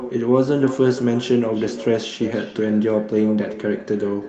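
From start to finish, every phrase of speech is trailed by a fainter, thinner copy arriving roughly a third of a second later and sitting about 14 dB below the original. This is echo with no canceller: the far end played the call through a loudspeaker, its microphone caught that sound, and nothing subtracted it before it travelled back across the network. Behind the echo, the band stops at 8 kHz, as expected for an Opus call at a bitrate around 32 kbps.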